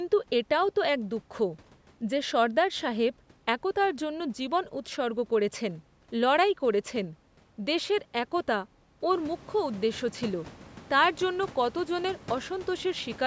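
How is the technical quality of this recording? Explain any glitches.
The recording has no glitches: the speech has passed through ordinary call microphone processing that leaves nothing above 8 kHz, and the room noise behind it rises by about 14 dB at roughly 9 seconds while staying about 22 dB below the speech.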